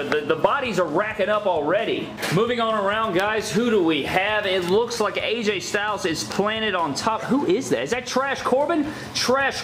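Nothing stood out on listening; no technical problem could be heard anywhere in the audio.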